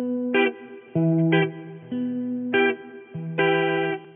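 No technical faults can be heard in this sound.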